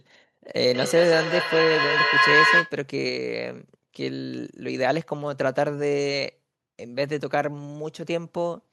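From 0.5 s to 2.77 s there is feedback echo between two devices. Two devices in the same room share one call. One plays back what the other's microphone sent, and that microphone picks it up again. Neither echo canceller removes sound played by the other device. Each word returns about every fifth of a second. The repeats do not fade. They build up, reaching about 4 dB above the speech itself.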